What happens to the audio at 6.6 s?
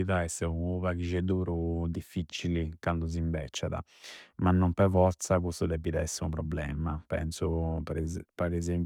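Nothing goes wrong at 6.6 s; the speech there plays through intact, with no dropout, click, distortion or other fault.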